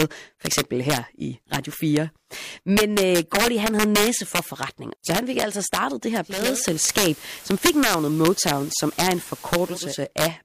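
Integer overflow runs through the whole speech clip. The loudest peaks are driven about 4 dB past the limit. Instead of being held there, they wrap to the opposite sign. A small fraction of samples flip this way, giving sharp, violent cracks on loud syllables.

At 6.22 s, just after "altså startet det her", the digital radio blends to analogue FM. The crossfade takes 0.43 s. Hiss rises to around 20 dB below the speech. The level shifts about 1 dB. It blends back at 10.08 s.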